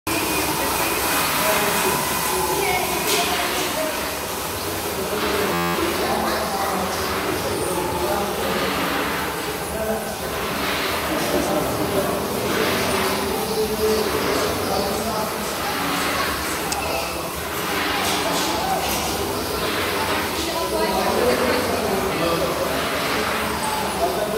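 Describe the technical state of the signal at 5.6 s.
A system hang loop runs from 5.54 to 5.75 s: playback froze while the hardware kept replaying one 11.6 ms slice of its ring buffer, which fits a 512-sample buffer. Eighteen identical repeats form a steady buzz at 86.1 Hz before normal audio resumes.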